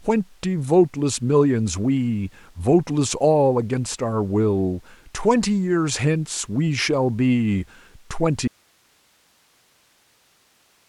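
At 8.48 s an audio dropout to a faint residue begins. Speech cuts abruptly to hiss roughly 40 dB down through the end, likely a lost feed on a still-live path. The waveform collapses to a thin, flat noise band.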